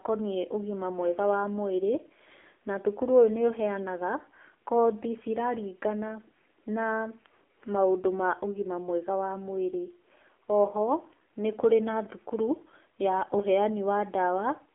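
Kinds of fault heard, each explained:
AMR narrowband mobile codec: the speech has been squeezed through the 2G/3G phone codec. This codec samples at 8 kHz and rebuilds the voice from a vocal-tract model driven by sparse pulses within each 5 ms. The damage is heavy, with a buzzy, synthetic tone that fits a low mode around 6.7 kbps. A spectrogram shows energy confined to a telephone band of 300 Hz to 3.4 kHz, blank above 3.6 kHz.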